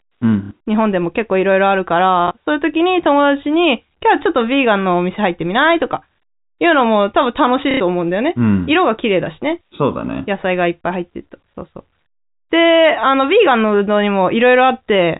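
At 0.45 s, 2.28 s and 7.71 s the speech hits packet loss with the last packet repeated, lasting 60, 30 and 90 ms. The gaps fit 30 ms packets, so the longest run buzzes near 33 Hz, the two longer runs sound like a brief robotic stutter and the single repeat like a small blip. A plain dropout would go silent and smoother concealment would fade, but here the held fragment repeats audibly, over the narrow band of the G.711 telephone coding.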